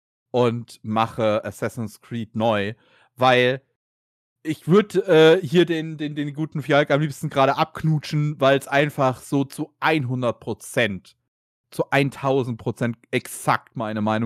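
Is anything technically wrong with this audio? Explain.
No, there are no technical faults to report in this speech recording.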